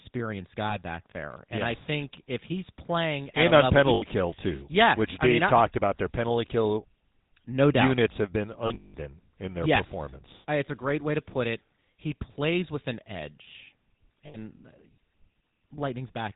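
Throughout, the speech carries the plainly audible buzzy, gravelly roughness of the GSM full-rate codec at 13 kbps. Its pulse-driven vocal-tract model keeps only a sparse excitation, and a spectrogram shows nothing above 4 kHz, with coarse, smeared harmonics below.

Lost GSM frames follow. The decoder holds the last good frame, so each gap rings rough and metallic and shows as a frozen smear. They fall at 0.70–0.76 s before "back there", 3.94–4.04 s, 10.66–10.69 s, and 14.26–14.37 s after "plays with an edge". The worst is 8.66–8.95 s, between "doubt units have been" and "in their yes performance", with about 240 ms lost over 280 ms and the longest dropout around 0.2 s.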